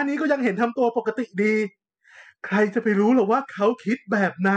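No faults detected in this speech recording; nothing to log.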